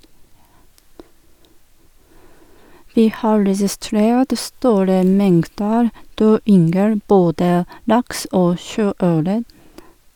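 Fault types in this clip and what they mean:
Listening to the speech turned up nothing that stood out.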